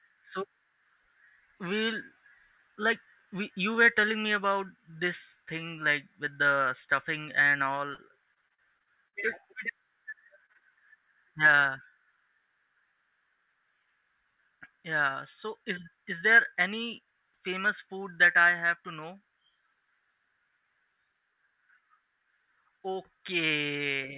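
Repeated packet loss (robotic sound) runs from 7.94 to 9.16 s, just after "with the stuffing and". Seven gaps up to 50 ms are each patched by extending the last sound, leaving roughly a sixth of the stretch choppy.

Short concealed packet loss follows at 10.10 to 10.14 s, 10.46 to 10.61 s, and 10.53 to 10.57 s. About 20 ms of audio went missing each time and was filled in from the preceding sound, giving brief smears or wobbles.

Through the G.711 mu-law call path, nothing above 4 kHz is present.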